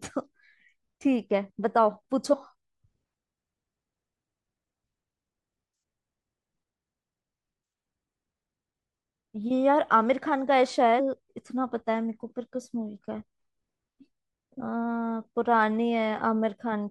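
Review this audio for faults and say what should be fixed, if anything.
Damaged data in the compressed stream makes the decoder misread frames and lose sync, producing brief glitches in the speech at 2.32 to 2.34 s, 10.99 s and 14.6 s. Check integrity with frame checksums and retransmit or re-fetch corrupted segments before decoding.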